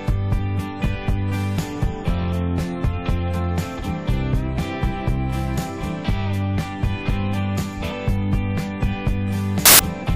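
At 9.66 to 9.79 s, samples built from the wrong bytes turn the sound into loud, harsh broadband noise, visible as a full-band spectrogram smear and a densely filled waveform.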